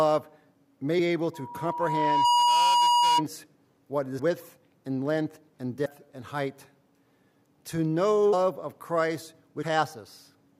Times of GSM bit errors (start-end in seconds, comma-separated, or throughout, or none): none